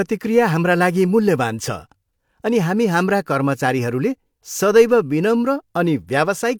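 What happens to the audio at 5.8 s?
Nothing goes wrong at 5.8 s; the speech there is intact, with no dropout, click or distortion.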